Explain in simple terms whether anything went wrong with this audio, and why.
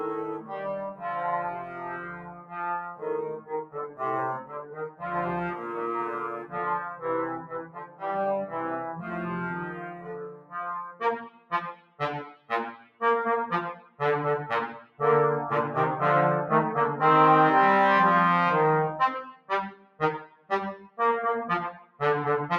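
Yes, something went wrong. All the way through, the sound keeps swelling and sinking in loudness, with held parts fading away while sharp starts come through clearly. This is a noise suppressor applied to music or sounds: a tool built to clean up speech was left switched on, and it keeps treating steady, lingering sound as unwanted background noise and turning it down. The result is a pumping, unsteady, thinned-out quality across the whole clip.

At certain moments the damage is stronger. This is sound cut by the noise suppressor, where the tool mistook part of the audio for noise and pushed it well below the rest. It happens from 0.38 to 5.02 s, 6.44 to 8.03 s, 9.68 to 13.01 s, 13.75 to 14.0 s, 14.81 to 15.0 s, 19.32 to 20.98 s and 21.78 to 22.0 s. The longest stretches, around 0 to 5 s and 10 to 13 s, lose the most sound, with lingering parts sinking or their fade-outs cut short.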